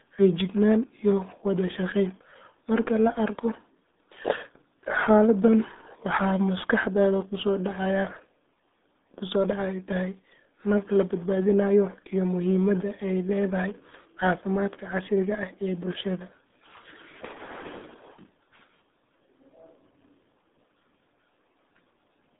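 Speech squeezed through the RealAudio 14.4 codec for the whole clip: muffled and gargly, consistent with an 8 kbit/s dial-up codec. A spectrogram shows energy confined to roughly 200 Hz to 3.6 kHz, with nothing above 3.8 kHz, and smeared, blotchy harmonics.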